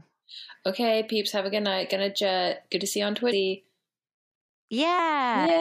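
Speech with compressed frames skipped at 3.31 s and 4.98 s, jumping ahead about 0.4 s and 0.3 s, consistent with dropped 26.1 ms frames. The spectrogram and waveform show jumps in content at each join.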